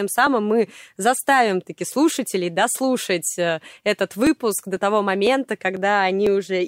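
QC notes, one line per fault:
0.27–6.27 s, periodic USB or driver dropouts: a tick roughly every 0.5 s throughout the speech, around a dozen or more in all, each where about a millisecond of audio is skipped rather than filled with silence, so the waveform jumps and clicks. A background task repeatedly stalling the driver likely causes it. The strict, metronome-like spacing, and ticks heard only while sound is present, set it apart from random clicks or irregular buffer underruns.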